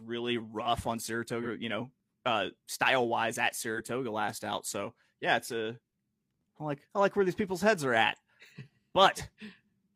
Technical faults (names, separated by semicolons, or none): AAC frame loss with concealment